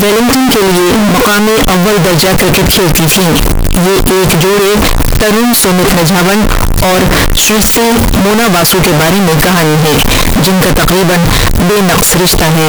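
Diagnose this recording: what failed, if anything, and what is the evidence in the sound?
Float read as integer, throughout: speech is squared at a high, nearly fixed level, noise matches speech loudness; likely 32-bit float read as 32-bit integer in sample-format conversion.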